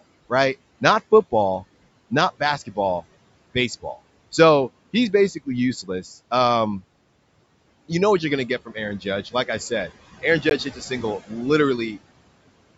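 Throughout the recording, a noise suppressor pulls down bands it treats as steady noise, by about 21 dB. The background dips between phrases and rises under them.

From 5.83 to 6.06 s, just after "he's basically", the suppressor mistakes speech for noise and lowers it by as much as about 11 dB. Roughly a tenth of a second of sound comes out swallowed and faint.

At 10.50 s the audio drops to silence for 16 ms and then resumes. This is likely a Bluetooth stall, where the headphone buffer ran empty while delayed packets were resent.

From 10.65 to 11.04 s, the noise suppressor again cuts into the speech, by up to about 10 dB. Around a tenth of a second sounds faint or clipped away.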